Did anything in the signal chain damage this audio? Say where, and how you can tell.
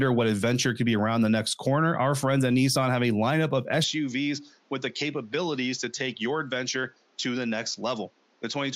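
Yes. From 3.84 s, right after "have a lineup of", the speech abruptly loses everything above 7.3 kHz, drops a few dB, and gains a new low noise floor, with no gap. That points to an input switched to a poorer device at the driver stage, likely a different microphone. A codec bitrate drop wouldn't change level or noise character.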